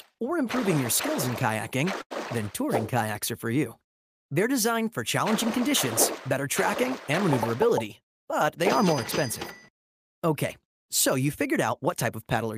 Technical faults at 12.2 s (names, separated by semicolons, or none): none